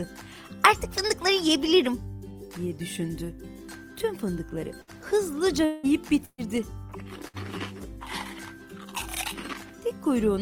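At 4.81 to 4.90 s, a burst of packet loss removes about 60 ms of audio. The receiver stretches the last sound into a brief fading buzz or hiss before the audio resumes further on. The same happens at 6.25 to 6.46 s, where 120 ms is lost and the concealment decays to 40 ms of silence, and at 7.28 to 7.36 s, another 60 ms gap.

From 5.65 to 5.86 s, the audio turns into a held, fading buzz or hiss for about 180 ms and then jumps ahead past the missing stretch without reaching silence. This is likely a long network dropout.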